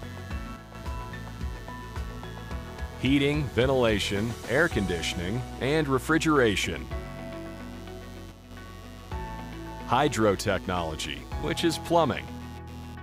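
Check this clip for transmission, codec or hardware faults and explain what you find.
Two hardware faults are present.

Computer activity noise runs throughout. Processor and graphics load shift the shared ground, adding a buzzing pulse near 100 Hz, roughly 25 dB below the signal.

From 0.56 to 0.75 s and from 8.32 to 8.51 s, the level drops abruptly by about 6 dB. This points to one channel dropping out, likely a lost stereo channel.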